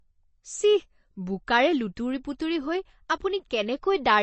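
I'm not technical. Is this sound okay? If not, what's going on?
No. Throughout the clip the speech sounds dull and plainly watery, with s sounds turning swishy and nothing above about 8.3 kHz. This is likely MP3 compression squeezed too hard: the encoder drops the treble and the faint details to save space.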